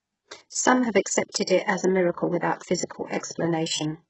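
Throughout, the speech carries heavy damage consistent with HE-AAC compression at a very low bitrate, likely near 8 kbps: nothing above 8 kHz, and replicated treble makes sibilants gritty and metallic. From 3.19 to 3.23 s, pre-echo appears as quantisation noise spreading about 42 ms ahead of an attack, producing a brief hiss and a smeared onset.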